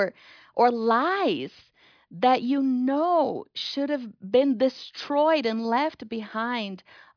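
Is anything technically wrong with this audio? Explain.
No, nothing technically wrong can be heard in this speech recording. The signal stays steady the whole way, with no audible fault at any point.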